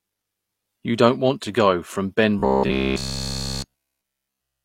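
From 2.39 s to 4.64 s the speech becomes robotic sound from repeated short buffers: a rigid, metallic buzz fixed at 66.8 Hz, likely from a short chunk of roughly 15 ms being looped throughout. Unlike a stutter, the fixed pitch persists while the speech contour faintly continues.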